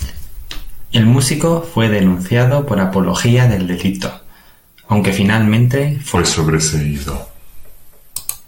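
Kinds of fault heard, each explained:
Section at the wrong speed: After "aunque finalmente", the speech slows to 0.83 times speed. It drops about three semitones, likely from a mismatched clock.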